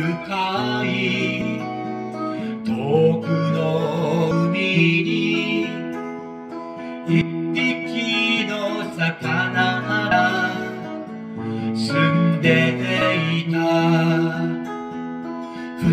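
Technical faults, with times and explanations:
4.31, 7.21, 10.11 and 13.01 s: audio missing between chunks, evenly spaced skips losing about a tenth of a second, joined without silence, likely at 3 s chunk handovers.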